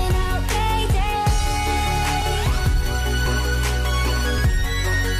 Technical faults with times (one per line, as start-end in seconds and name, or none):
0.52 dropped buffer (overrun)
2.22 dropped buffer (overrun)
3.26 dropped buffer (overrun)
4.38 dropped buffer (overrun)